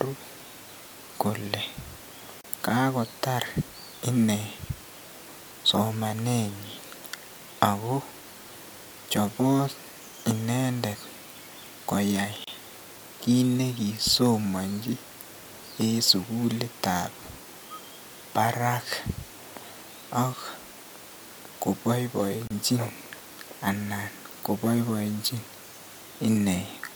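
A speech recording with three short silences, each about 31 ms long, at 2.41, 12.44 and 22.47 s, about 10 s apart. These are gaps at a join of encoded pieces: separately encoded segments were butted together untrimmed, leaving encoder start delay and last-frame padding in place. Unlike a network dropout, the spacing is perfectly regular and no sound is lost. The speech resumes where it stopped, with smeared edges.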